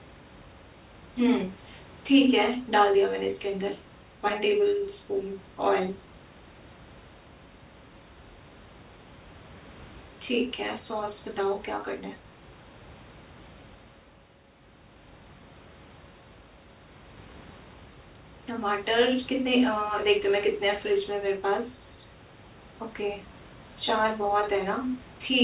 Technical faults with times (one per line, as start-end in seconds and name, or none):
none